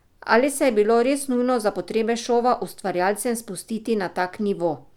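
No technical faults turn up anywhere in this recording, so there's nothing here to flag.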